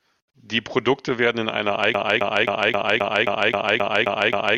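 The playback or stream likely stalled at 1.94 s, just after "werden in einer", and kept resending its last buffered fragment: a broken-record loop. A 0.26 s slice of speech repeats exactly ten times, back to back, through to the end, replacing whatever followed.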